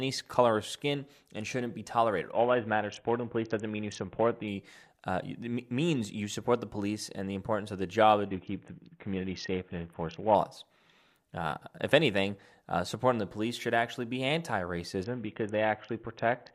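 Just after "and shouldn't be tolerated", from 2.32 to 4.48 s, the speech turns dull and gritty, and again after "importance of the job" (8.26 to 10.35 s) and "should actually be anti" (15.04 s to the end). It's a Bluetooth SBC bit pool drop, consistent with a fall from 28 to 5 (about 54 kbps), starving the upper sub-bands and coarsely quantising the rest.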